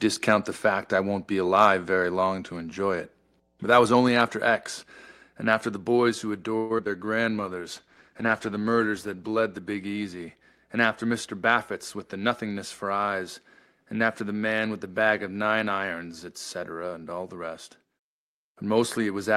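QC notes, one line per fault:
0.00–12.83 s, mains hum: A steady 60 Hz tone sits under the audio, about 35 dB below the signal, and stops just before "eyes and after". A ground loop or nearby transformer is coupling the power line into the signal path.
1.60–1.67 s, microphone overload: A brief harsh crackle rides on the loudest peak. The peaks go about 2 dB past the converter's limit, so their tops are flattened. An input gain set too high at the microphone is the likely cause.
6.57–6.72 s, call audio freeze: The sound stalls into a fading buzz or hiss for about 126 ms, then carries on where it stopped. Nothing is lost and there is no silence. The likely cause is delayed packets draining the jitter buffer, with the receiver stretching the last sound.
6.78 s and 6.85 s, short concealed packet loss: Two quick smears follow the freeze. Packets carrying about 40 ms and then 20 ms of audio arrived too late to use. 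The receiver covered each hole with a short continuation of the previous sound, then blended back in.
7.32–10.31 s, call bitrate drop: The audio turns rough and duller. The encoder rate fell from 40 kbps to 15 kbps and stayed at its lowest for about 1.7 s. Coarser coding and a reduced top end cause the degraded, muffled character.
11.10–12.59 s, jitter buffer speed-up: The sound runs about 7% fast at unchanged pitch and feels hurried. The buffer had built up surplus delay. The receiver cut many small pitch-period slices, roughly a tenth of a second in total, to catch up.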